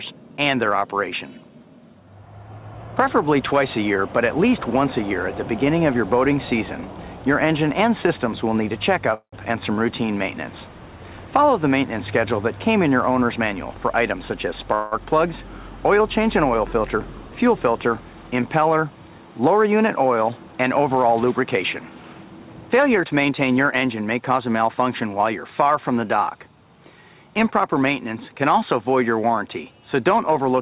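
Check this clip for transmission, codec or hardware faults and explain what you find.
Two kinds of fault appear: two call audio freezes and two jitter buffer speed-ups. The audio also carries no energy above 4 kHz, which fits a narrowband call codec such as G.711.

Call audio freeze, at 9.14–9.34 s and 14.75–14.93 s: the sound stops advancing and is held as a fading buzz. The first lasts 184 ms and ends in about 100 ms of silence. The second lasts 169 ms and never goes fully quiet. The likely cause is delayed packets draining the jitter buffer. Nothing is lost, and the audio resumes where it paused. A spectrogram shows smeared, repeated bands tapering off, and the first freeze drops to a flat gap in the waveform.

Jitter buffer speed-up, at 13.24–14.67 s (109% speed, roughly 150 ms removed) and 22.22–23.75 s (112% speed, about 200 ms removed): the receiver trimmed many short pitch-period slices to shrink excess buffered delay. 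The sound runs hurried but keeps its pitch. A spectrogram shows compressed timing with harmonics unshifted.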